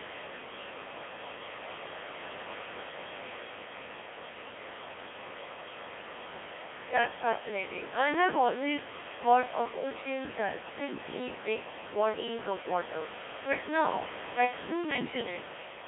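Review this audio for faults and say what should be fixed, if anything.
The whole clip is speech passed through the Codec 2 vocoder, heavily damaged. Rather than preserving the waveform, the decoder rebuilds the voice from sine waves driven by pitch, voicing, energy and a spectral envelope. That gives the robotic, buzzy quality heard throughout. The narrow band, roughly 250 Hz to 3.5 kHz, and the coarse texture point to the 1.3 kbit/s mode. The room noise, sitting about 12 dB below the speech, is caught up in the synthesis too and comes out smeared. Prevention: use a higher-rate mode or a waveform codec where the channel allows.

From 10.85 to 10.98 s, between "thought of oceans as" and "big bodies of water", there are bit errors on digital voice radio. For about 130 ms the synthetic voice jumps in pitch, level and tone colour and turns into a short warbling burst. This fits a single corrupted frame. 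A bit error rate of around 2 percent reached parameters that each control a whole frame. Prevention: improve link margin or add stronger forward error correction on the vocoder bits.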